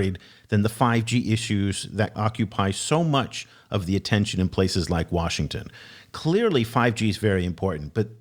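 A spoken-word recording with no technical faults audible anywhere in the signal.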